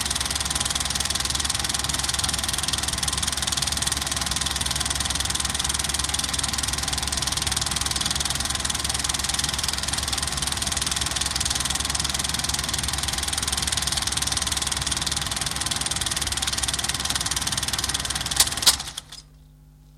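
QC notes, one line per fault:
1.01–1.07 s: loose connector crackle, an irregular 60 ms burst of scratching as a worn or dirty contact rapidly makes and breaks, chopping the signal.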